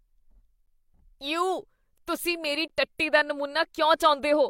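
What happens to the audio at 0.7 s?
At 0.66 s the speech breaks for about 11 ms: a gap between stream segments, where mismatched segment timestamps leave a hard-edged silent hole. Unlike a dropout, no audio is lost.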